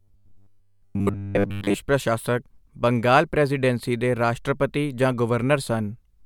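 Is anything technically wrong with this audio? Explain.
Yes. From 0.01 to 1.74 s the speech has a rigid, metallic buzz pitched at 100 Hz, following the words only loosely, up to just before "ਪ੍ਰਸ਼ਾਸਕ ਬੰਗਾਲ ਪ੍ਰੈਜ਼ੀਡੈਂਸੀ ਦੇ". This is robotic sound from repeated short buffers, and the likely cause is audio arriving too slowly, so the playback software loops the last fragment, consistent with a 10 ms buffer, while the real signal is skipped for most of that stretch. The repetition rate imposes the fixed 100 Hz tone.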